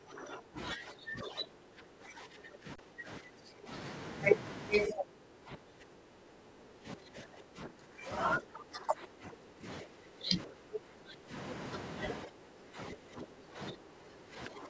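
Speech that has passed through call microphone processing, with content reaching no higher than 8 kHz, which fits a 16 kHz sampling rate. Across most of the clip the talker's level sinks and recovers in stretches: 0.00–0.58 s, 0.74–3.70 s, 4.87–8.09 s, 8.39–9.66 s, 9.82–11.33 s and 12.25–14.69 s. The drops reach about 20 dB in the first stretch and about 15 dB in the rest. This is speech suppressed in double talk, likely caused by the far end talking at the same moment, so the echo canceller could not separate this talker from its own loudspeaker echo and attenuated both. Inside the second stretch, at 2.76–2.78 s, the signal goes flat for about 29 ms and then resumes with only a soft edge. That is an underrun with held sample: the output buffer emptied and the converter held its last value instead of dropping to zero. Playback picked up where it stopped without losing any audio, which is why there is no sharp click.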